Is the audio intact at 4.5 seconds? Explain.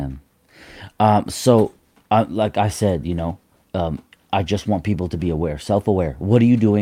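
Yes, the audio is intact at 4.5 seconds, with no dropout, click, distortion or other fault at that point in the speech.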